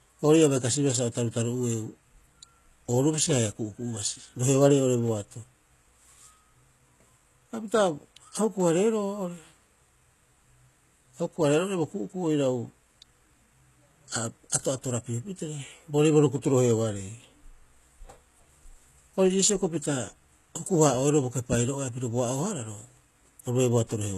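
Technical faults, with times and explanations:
Throughout, HE-AAC compression: the speech has a bright but synthetic top end, with s sounds turning gritty and lispy and a metallic sheen over the upper range, while nothing at all is present above about 12.3 kHz. This is likely HE-AAC coding at a low rate, consistent with roughly 16 kbps, where only the lower spectrum is coded and the treble is rebuilt by copying lower bands upward, so its harmonics don't line up with the real ones.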